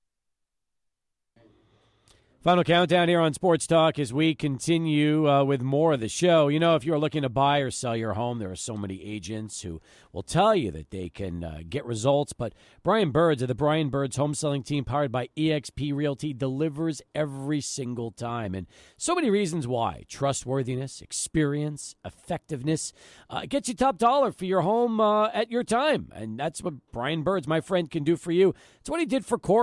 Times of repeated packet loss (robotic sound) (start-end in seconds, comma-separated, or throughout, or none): none